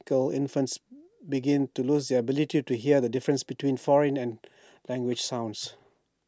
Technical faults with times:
none

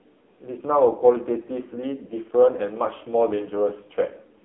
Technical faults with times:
0.00-4.44 AMR narrowband mobile codec

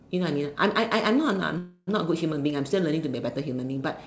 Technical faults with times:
1.58-1.89 call audio freeze

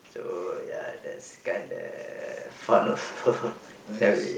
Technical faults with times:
none

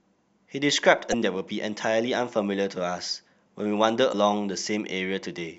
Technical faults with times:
1.09-1.14 damaged data in a compressed stream
4.09-4.15 damaged data in a compressed stream

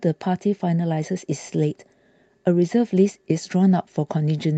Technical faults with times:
0.00-4.58 clock drift between sender and receiver
0.48-4.55 repeated timing corrections

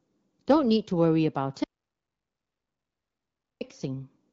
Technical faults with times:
1.64-3.61 audio dropout to silence

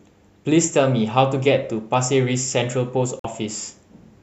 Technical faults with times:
3.19-3.25 digital broadcast dropout

